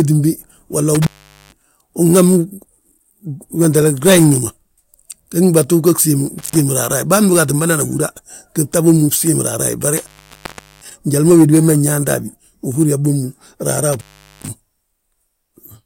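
Intermittent contact breaks the speech at 0.95, 6.38, 9.97 and 13.93 s, opening for 0.44, 0.12, 0.75 and 0.40 s. Crackle at each edge and faint hiss in the gap set it apart from clean digital dropouts.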